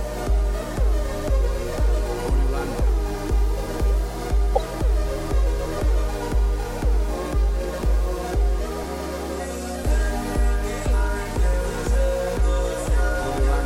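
A corrupt frame decoded at 4.55 to 4.58 s: damaged bits in the compressed stream were played back rather than concealed, so misread gains and codes push energy into the wrong frequencies. The result is a short blip peaking near -5 dBFS, about the span of a few codec frames.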